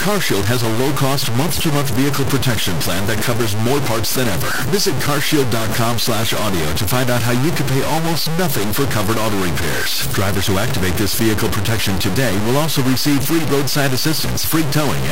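The speech has likely been reduced to 3-bit resolution by simple truncation with no dither, so every sample is forced onto one of only a handful of levels. Because the rounding error tracks the waveform, the distortion sits nearly as loud as the speech itself and changes with it from start to end: a coarse, grainy buzz riding on every syllable, with quieter stretches breaking up into sputtering or dropping out entirely. That is the signature of low bit depth without dither.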